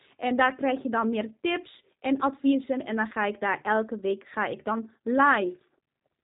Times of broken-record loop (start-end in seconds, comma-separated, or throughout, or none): none